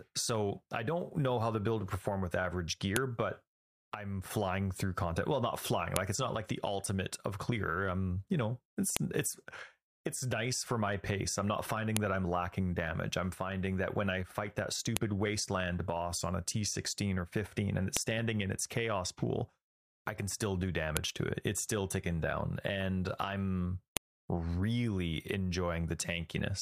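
Sharp snaps at 2.96, 5.96, 8.97, 11.97, 14.97, 17.97, 20.97 and 23.97 s are a file header played as audio. Each 3 s speech piece kept its header bytes, heard as a loud click. Their strict 3 s spacing, regardless of the speech, sets them apart from random clicks.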